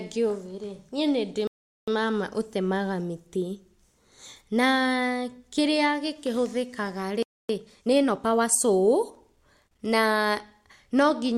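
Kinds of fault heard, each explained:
Rebuffering stall: Just after "ngĩũĩ rĩ niĩ nĩndĩ", at 1.47 s, the speech drops into silence for about 0.40 s, then picks up at 1.88 s with "mama ũtemaga mĩtĩ", exactly where it broke off. No speech goes missing, but the clip gains that 0.40 s of dead air. The player had used up the audio it had downloaded and waited for more to arrive before continuing.
Playback stall: At 7.23 s the speech halts mid-flow and stays silent for about 0.27 s before returning at 7.49 s. The gap is shorter than the earlier one, but it is plainly heard as an interruption. The likely cause is the player being starved of data or having its processing thread blocked, so the output fell silent until it recovered.
Time-compressed catch-up: Right after the second gap, from 7.49 to 8.55 s, the speech runs hurried at 1.25 times normal speed. The pitch stays where it was. To recover the time lost in the stall, the player trimmed small pieces out of its queued audio and cross-faded across the cuts. 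That shortens the backlog without raising the pitch, but leaves the stretch sounding rushed.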